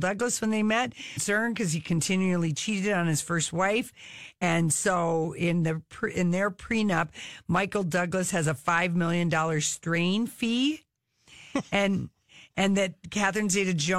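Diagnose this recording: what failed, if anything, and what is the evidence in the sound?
The failure is in the codec stage: damaged data in a compressed stream. Brief blips sound at 1.16 s, after "when they met", and at 4.41 s, after "on his first wife". Corrupted bytes made the decoder misread frames, lose sync and hunt for the next header.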